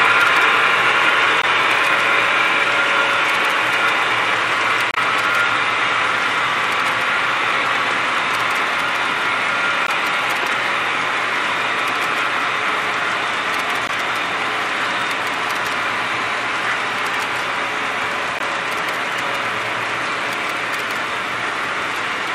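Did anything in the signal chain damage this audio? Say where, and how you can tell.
Yes. The damage happened at the codec stage: the compressed stream carried damaged data, so the decoder misread those frames, lost sync and had to search for the next valid frame header. Each hit is a short blip lasting a few hundredths of a second, at 1.42–1.44 s, 4.91–4.97 s, 9.87–9.89 s, 13.87–13.90 s and 18.39–18.41 s. The fairly regular spacing of these brief hits points to frame-level corruption rather than an analogue or converter fault.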